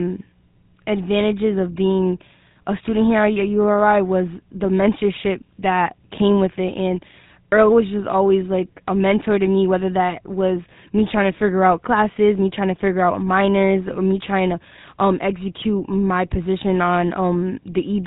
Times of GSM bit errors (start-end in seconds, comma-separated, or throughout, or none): 15.60-15.65